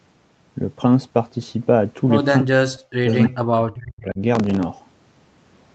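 Speech runs through a call path here, and between 2.41 and 4.2 s the talker is speech suppressed in double talk, most likely because an echo canceller mistook overlapping talk for echo. The level drops by up to about 40 dB in pieces totalling around a second and a half, visible as chunks carved out of the waveform and gaps in the spectrogram's harmonics. From 3.09 to 3.16 s a short echo leak is audible: a faint copy of the voice delayed by 320 ms, about 30 dB below the speech, likely loudspeaker pickup that the canceller failed to remove. On a spectrogram it appears as a weak, time-shifted ghost of earlier harmonic bands. From 4.35 to 4.63 s processor overload crackle tears across the sound. Repeated missed deadlines replay fragments of old audio with hard edges, which fits a buffer of roughly 3 ms. The waveform shows a dense run of small discontinuities, and the spectrogram shows them as thin vertical broadband streaks.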